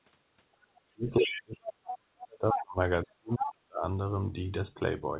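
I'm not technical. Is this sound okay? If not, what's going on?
No. From 0.58 to 2.79 s and again from 3.04 to 3.83 s, the talker's voice sinks to near silence or breaks into pieces. This is speech suppressed in double talk, likely because both ends spoke at once. Unlike a network dropout, the gaps follow the overlap rather than occurring at random.

In and around those stretches, the other side's voice leaking through appears as short bursts of a second voice at 1.2, 1.85, 2.2, 2.51, 3.02 and 3.38 s. The likely cause is the talker's loudspeaker being picked up by the mic. Unlike background chatter, it is one voice, briefly audible, at times as loud as the talker.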